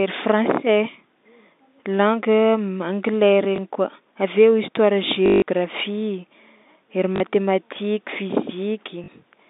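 Packet loss with the last packet repeated occurs at 3.56 to 3.58 s, 5.26 to 5.42 s, 7.16 to 7.20 s and 9.04 to 9.08 s. Each gap is filled by replaying the last received chunk. A replay seldom restarts in step with the pitch. The 160 ms run at 5.26 s buzzes robotically at 50 Hz, which fits 20 ms packets. On a waveform, identical blocks repeat with a step at each seam. A spectrogram shows a frozen, striped pattern. The narrow telephone band is audible throughout.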